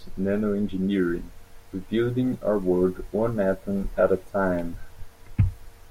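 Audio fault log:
No technical faults can be heard anywhere in this speech recording; the signal holds steady and continuous throughout.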